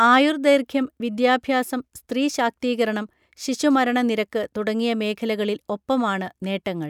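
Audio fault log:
0.04–0.49 s, hard clipping: crackly, slightly harsh edges on the loudest peaks, where about 2 dB of overload flattens the waveform tops and adds high harmonics.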